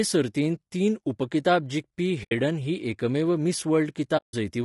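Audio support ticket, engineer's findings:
Whole clip: speech sounds rough and grainy, with hiss filling the gaps between harmonics and a thin, synthetic top end. Damage is plainly audible throughout. Likely cause is low-delay AAC compression (AAC-ELD) at a low bitrate, consistent with roughly 32 kbps. Short low-delay frames resolve pitch harmonics poorly and spend more bits per second, so at this rate the encoder leaves noise between harmonics and rebuilds the upper band coarsely.

2.23–2.32 s and 4.17–4.34 s: speech briefly drops to silence, fading out and back in with soft edges. The dropouts last about 80 ms and 160 ms, which fits four and eight lost frames of about 20 ms. Component: AAC decoder, frame loss with muting. The lost frames' spectra are zeroed, and the overlapping windows taper the sound down and back up around each hole.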